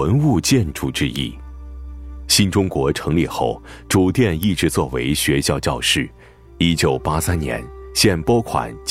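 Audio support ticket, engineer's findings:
Sharp snaps at 1.16 s and 4.43 s, about 3 ms and 1 ms long, peaking around -10 dBFS, sitting on top of the sound. Electrical switching spike, likely from a nearby switch, motor or static discharge arcing and coupling into the audio line.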